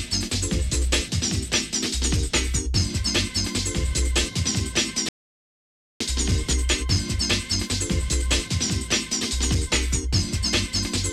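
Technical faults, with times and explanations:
5.09–6.01 s, rebuffering stall: the player used up its store of downloaded audio before the next portion had arrived, so playback halted and waited for data instead of skipping ahead. The sound drops abruptly into silence for about 0.92 s, then picks up at exactly the point where it broke off. No material is missing on either side of the gap; the clip simply runs that much longer, with a dead pause inserted.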